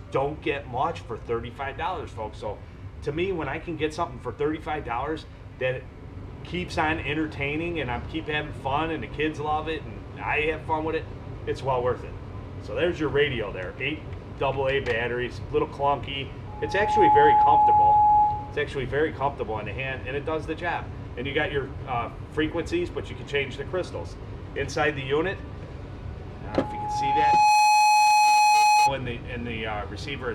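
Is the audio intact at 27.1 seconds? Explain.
No. At 27.1 s a steady 843 Hz tone swells over about a second into a squeal roughly 10 dB above the sound, lasting from 26.48 to 28.95 s. This is loudspeaker feedback squeal: the microphone hears its own loudspeaker, and at that frequency the loop gain exceeds one.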